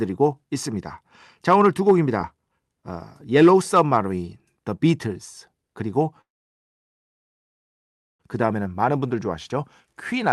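From 6.21 s to 8.21 s the audio stops for about 2 s in a call audio freeze, most likely caused by packets held up in transit so that the jitter buffer ran empty. The receiver stretches the last sound into a fading tail that gives way to silence almost at once, and the silence fills nearly the whole stretch. When the audio returns it carries on from where it stopped. Unlike a dropout from lost packets, nothing is missing: a gap has been inserted, not cut out.

From 8.45 s to 10.26 s comes a jitter buffer speed-up, as the receiver works off extra delay in its buffer. It trims short pitch-period-sized pieces again and again, around 150 ms in total, so the speech runs at 109% speed and sounds hurried. The pitch stays where it was. That separates this from a sample-rate or playback-speed error, where faster audio would also sound higher. Through all of this the Opus call path carries the sound with its usual coding noise and a top end that stops at 12 kHz.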